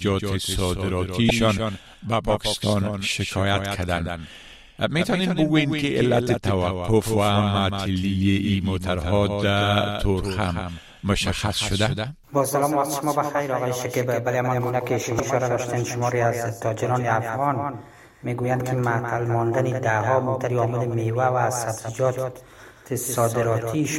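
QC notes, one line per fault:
Throughout: doubled audio track. A second, likely slower capture path mixes in a copy about a fifth of a second late and roughly 5 dB down, so everything sounds echoed without room decay.
1.27–1.30 s, 15.17–15.20 s, 18.60 s: damaged data in a compressed stream. The decoder misreads corrupted frames and resyncs, producing brief chirps or blips.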